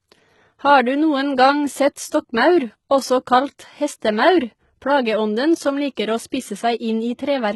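Throughout the clip, the speech shows the marks of HE-AAC compression, the likely cause, with heavy damage and nothing above 11.8 kHz. The upper band is not carried directly. It is rebuilt by copying lower bands upward under a coarse envelope, which fits a bitrate around 16 kbps. The treble therefore sounds synthetic, its harmonics fail to line up across the crossover, and sibilants come across as gritty, metallic or lisped.

At 4.00 s, just after "også kalt", a pre-echo appears. A sharp attack lands late in a transform block. The quantisation noise, spread evenly across that block and sized for the loud onset, leaks into the quiet stretch ahead of it, about 20 ms long. The result is a brief hiss that arrives before the attack, which itself loses its crispness and sounds softened and smeared.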